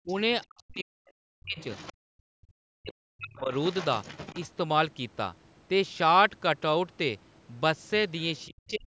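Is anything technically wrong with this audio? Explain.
Yes. The talker's speech dips sharply at 0.04–0.12 s, 0.44–1.57 s, 2.28–3.52 s and 8.47–8.93 s, by up to about 40 dB. This is likely speech suppressed in double talk, where the echo canceller mistakes overlapping speech for echo. Unlike gating, the voice itself drops.

A second, fainter voice comes through at 0.42–0.63 s, 1.57–1.93 s and 3.36–4.47 s, roughly 20–35 dB below the speech. This is likely the other side's voice leaking through as residual loudspeaker echo the canceller missed, adding sound rather than removing it.

At 1.93–2.00 s the room sound drops by about 36 dB while the loudspeaker plays: background gated by the echo canceller, a brief dip in ambience rather than in the talker's voice.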